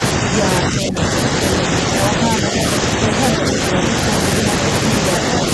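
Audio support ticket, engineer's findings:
Echo canceller likely misjudging double talk as echo and attenuating both sides. Speech suppressed in double talk: level dips about 10 dB at 0.61–1.09 s, about 5 dB at 2.81–3.20 s and 3.37–3.94 s.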